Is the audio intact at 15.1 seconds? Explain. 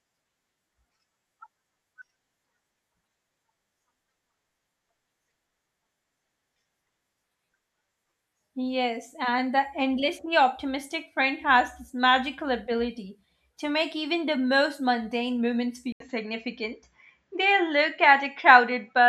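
Yes, at 15.1 seconds the speech plays through cleanly with no audible fault.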